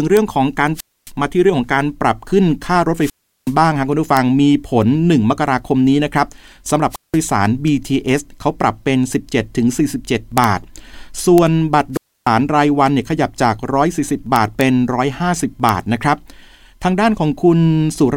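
Integer overflow cracks hit this speech recording at 0.17, 4.17, 10.38 to 10.44, 11.38, 14.36 to 14.61 and 15.69 s. Where loud peaks reach the top of the integer range, the samples wrap around to the opposite extreme rather than being held at the limit, so each peak jumps across the full scale. The result is a harsh, violent crack, far sharper than ordinary clipping. Wireless microphone squelch dropouts occur at 0.74 to 1.11, 2.97 to 3.55, 6.90 to 7.18 and 11.93 to 12.29 s. Each time, the analogue FM link weakens, hiss and static swell up, and the receiver's squelch then shuts the output off. That leaves holes of near silence lasting about 270, 370, 180 and 290 ms, before the voice comes back as the signal recovers.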